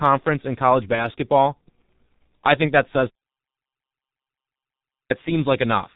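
Throughout, the speech sounds muffled and hoarse, with smeared consonants and no brightness above 4 kHz. This is heavy G.723.1 codec damage at 6.3 kbit/s: the codec models the voice in coarse 30 ms frames and updates slowly, so fast detail is lost.

From 0.95 to 1.08 s, just after "in college", the voice briefly stretches into a fading smear, then stays weak or distorted before recovering. This is VoIP packet loss concealed by the speech codec, which fits a single lost 30 ms frame. The decoder repeated its last pitch and filter at falling gain, and the following frames took time to rebuild.

From 3.11 to 5.10 s, right after "I think that says", the sound cuts to complete silence for about 2 s, with no room tone at all. This audio dropout to silence likely comes from the input disconnecting or failing while silence kept being written.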